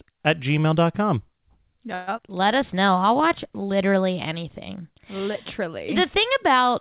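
At 1.94 to 2.09 s there's a call audio freeze: the last sound gets stretched into a fading buzz for about 130 ms, likely because packets stalled and the jitter buffer ran dry. Right after, at 2.17 to 2.20 s, a skip ahead jumps forward, dropping roughly 70 ms so the two sides butt together almost directly, with the receiver presumably catching up on the delay. Then from 2.33 to 3.00 s, just before "I'll watch literally anything", a jitter buffer slow-down repeats pitch periods to add 56 ms, so things drag at 92% speed with unchanged pitch. Throughout, the band stops at 4 kHz, which fits the narrowband G.711 mu-law call path.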